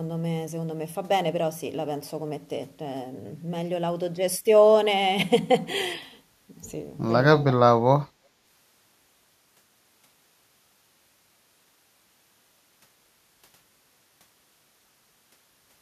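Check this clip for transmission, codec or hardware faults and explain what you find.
I find no faults in this clip to explain.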